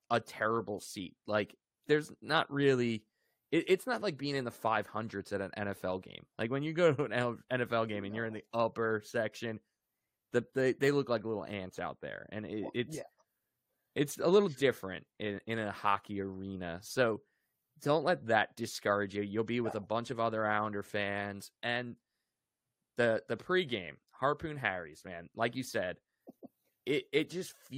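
No technical faults can be heard anywhere in the recording, and the signal stays steady throughout.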